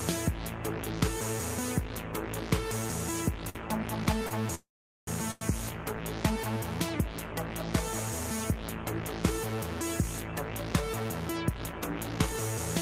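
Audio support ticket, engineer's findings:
Short stall from a late packet, three events: 3.49–3.58 s (55 ms held), 4.27–4.34 s (40 ms), 5.31–5.44 s (99 ms). Symptom: a sound held too long, with a buzz or dip; nothing lost, playback resumes at the same point. Component: receiver jitter buffer, ran empty waiting for a packet, last sound stretched until arrival. Spectrogram: frozen, smeared harmonics over each span. Waveform: repeating cycle, delay shifts by the fill length.

Call audio freeze, 4.55–5.10 s, 524 ms inserted. Symptom: the last sound carries on as a fading buzz or hiss, then about 420 ms of silence, then audio picks up where it stopped with nothing missing. Likely cause: packets held up in transit, jitter buffer drained. Spectrogram: a decaying smear then a blank band. Waveform: a tapering tail into a flat stretch, then an abrupt restart.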